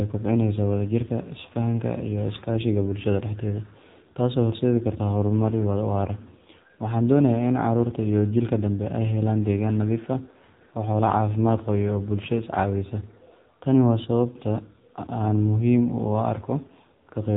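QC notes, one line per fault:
Throughout: AMR narrowband mobile codec. The speech has nothing above about 3.8 kHz and a plainly audible buzzy, synthetic edge, because each 20 ms frame is rebuilt from a vocal-tract model and a few excitation pulses rather than from the waveform itself. The damage fits a low bitrate of around 7.4 kbps. A simple low-pass filter would only dull the sound, whereas this adds a coded, robotic texture on top of the missing top end.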